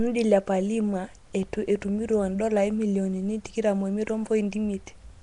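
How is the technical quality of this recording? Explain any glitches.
Technical quality is poor, with plainly audible codec damage across the whole recording. Nellymoser compression, throughout: the speech has a rough, hissy halo and a smeared, underwater character, and nothing sounds above 10.6 kHz. The likely cause is Flash's Nellymoser Asao codec at a rate that fits about 44 kbps. It spends a fixed, small bit budget on short blocks, so weaker bands are replaced with noise.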